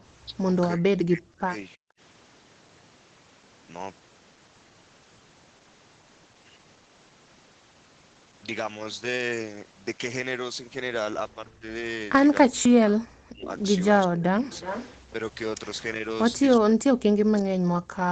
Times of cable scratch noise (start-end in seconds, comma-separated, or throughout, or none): none